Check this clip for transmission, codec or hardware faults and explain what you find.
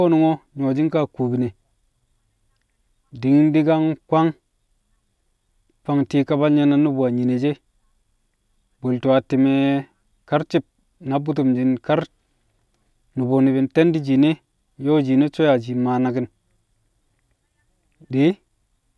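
Nothing in the speech points to a transmission, codec or hardware fault.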